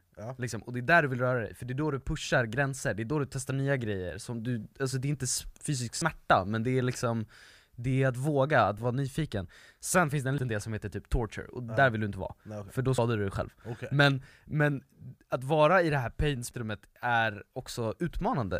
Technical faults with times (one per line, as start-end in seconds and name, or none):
2.00 corrupt FLAC frame
5.92-6.02 compressed frames skipped
8.74-8.83 corrupt FLAC frame
10.20-10.57 compressed frames skipped
12.98 compressed frames skipped
16.42-16.51 compressed frames skipped